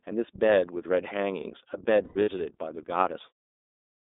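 iLBC codec damage runs through the whole speech clip. The band stops near 250 Hz and 3.7 kHz. Each frame is coded on its own, so speech sounds rough and synthetic, which fits 30 ms frames at about 13 kbps. The fade-out near 3.3 to 3.5 s is smooth.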